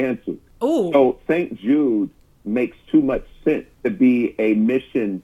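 No technical faults can be heard anywhere in the recording, and the signal holds steady throughout with no interruptions or damage to it.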